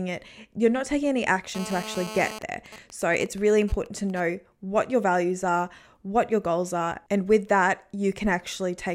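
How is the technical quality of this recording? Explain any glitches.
Two bursts of mobile-phone interference mar the recording. From 1.55 to 2.39 s, right after "you're not taking any", a GSM phone buzz sits about 12 dB below the speech. A nearby 2G handset on a call pulses at 217 Hz, and the audio circuit rectifies those pulses into a hard, raspy buzz. On a spectrogram it shows as a ladder of 217 Hz harmonics.

From 2.42 to 4.20 s, just before "what your values are", GSM signalling bursts follow, roughly 20 dB down. The handset's user has gone silent in the call, so only sparse transmission groups are sent. These come through as even ticks with a longer buzz twice a second, visible as clustered spikes on the waveform.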